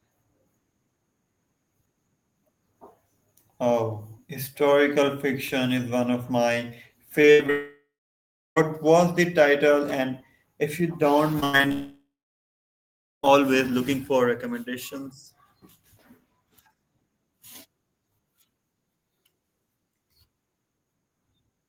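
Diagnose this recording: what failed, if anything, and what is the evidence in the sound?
Repeated packet loss (robotic sound) occurs at 7.21–7.50 s and 11.40–11.72 s, a network-stage fault. The first burst has four holes (longest 76 ms), the second five (longest 92 ms). Concealment stretches the last sound across each, so roughly half the span turns choppy.

A long network dropout follows each burst, at 7.50–8.58 s and 11.72–13.25 s. The sound smears into a fading buzz, then goes silent for about 0.68 s and 1.16 s, and resumes without the missing material. The likely cause is the network stream stalling entirely after the preceding losses.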